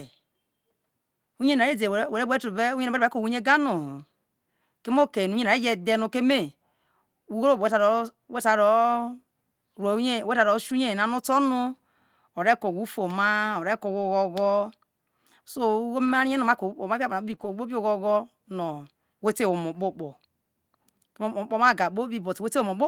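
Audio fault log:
10.69 s, 14.01 s, 16.05–16.11 s, 17.31 s, 17.39–17.45 s: lost packet rebuilt from error correction. Short rough, noisier patches of 20 to 40 ms, where the decoder played the low-bitrate backup copy carried in the following packet.
17.35–17.39 s: short concealed packet loss. A brief smear or wobble where about 20 ms of audio never arrived, so the decoder stretched the preceding sound across the hole before blending back.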